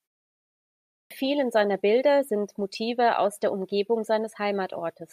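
At 0.97 s, speech returns after nearly a second of silence with a clipped start after a pause. The output path went idle in the quiet and was slow to wake. The first 136 ms are lost, so the speech starts abruptly, missing its opening sounds.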